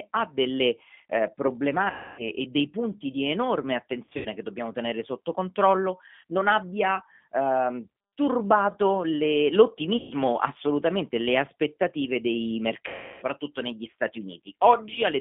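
Throughout, the G.729 codec, here the G.729A variant at 8 kbit/s, limits the speech to roughly 200 Hz to 3.5 kHz and rebuilds it from a vocal tract filter and sparse pulses, so the speech sounds plainly rough and synthetic. VoIP packet loss concealed by the speech codec occurs four times. From 1.90 to 2.28 s, after "ha delle eh" and before "e dei punti di", 280 ms of audio is missing. From 4.05 to 4.28 s, after "dei punti di enorme", 140 ms is lost in scattered gaps with a longest run of 80 ms. From 9.97 to 10.14 s, 140 ms is lost. From 12.88 to 13.25 s, after "assolutamente le aspettative dei", 340 ms is lost. In each gap the decoder stretches its last pitch and filter into a buzzy tone or coloured noise that fades, and the speech stays weakened briefly after the audio returns.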